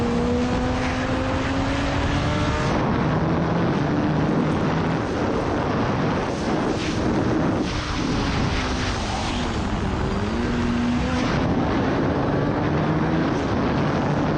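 No technical faults are audible anywhere in the audio.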